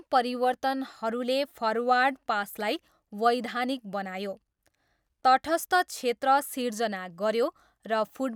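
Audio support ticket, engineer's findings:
No faults found in this speech clip. No dropouts, clicks, distortion or other transport or device problems were heard.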